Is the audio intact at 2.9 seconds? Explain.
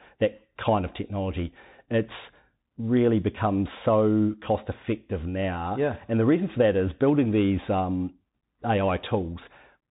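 No. At 2.9 seconds, as throughout the clip, the speech carries Bluetooth CVSD headset codec damage. The codec sends one bit per sample, stepping the waveform up or down with an adaptive step size, consistent with a 64 kbps headset link. Nothing above 3.8 kHz survives, so the speech sounds narrow and muffled. Where the signal changes faster than the step can follow, it distorts audibly: sibilants turn scratchy and a granular hiss sits beneath the speech.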